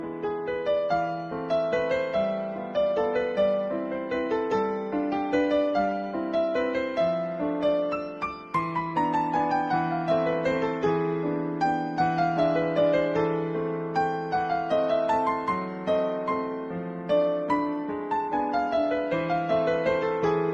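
No technical faults can be heard anywhere here.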